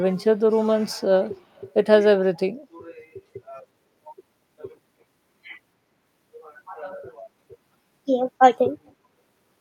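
From 1.35 to 1.73 s, a faint delayed copy of the speech can be heard underneath it. This is an echo leak. It trails the original by 308 ms and sits very low, roughly 35 dB below the speech. The cause is likely a far-end loudspeaker whose echo canceller let part of the returned sound through. A second, shorter scrap follows from 8.87 to 8.91 s. It has the same 308 ms delay and is even fainter, around 40 dB down.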